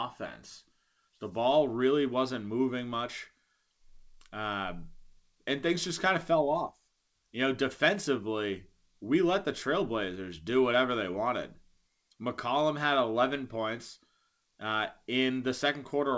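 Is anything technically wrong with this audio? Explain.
No, the speech arrives over a normally working call path whose wideband coding, consistent with a codec such as G.722, leaves nothing above 8 kHz, and no technical fault can be heard in the signal.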